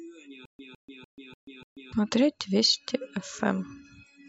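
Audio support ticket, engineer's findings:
Stutter with silent gaps, 0.45 to 1.93 s: likely stream stall replaying the last fragment on each retry. 158 ms burst, 137 ms silence, five repeats; speech between is lost.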